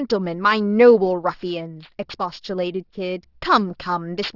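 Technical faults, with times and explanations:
Throughout, aliasing: the speech sounds like it was dropped to a rate of about 12 kHz with no anti-alias filter, so everything above 6 kHz folds back below it, making sibilants gritty and metallic, with the folded junk sitting about 20 dB under the speech.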